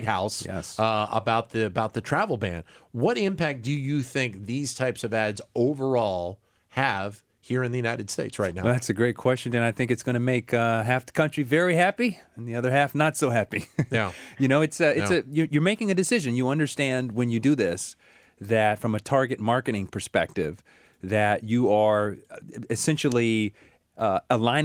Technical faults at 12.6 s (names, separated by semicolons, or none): none